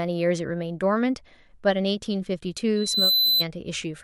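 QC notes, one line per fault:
2.76–3.45 s, loudspeaker feedback squeal: a pure tone at 4 kHz creeps in under the speech and swells over about a third of a second until it's sitting a little louder than the speech itself, then stops. That's the mic hearing the speaker it's driving, with the loop gain tipping past one right around 4 kHz, so that one frequency keeps feeding itself and runs away until the amplifier limits it or the loop gets broken.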